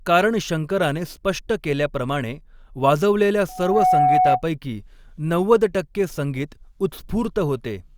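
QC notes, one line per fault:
3.48 to 4.42 s, loudspeaker feedback squeal: the microphone re-amplifies its own loudspeaker, so a 739 Hz tone swells over roughly 0.4 s to about 5 dB above the speech.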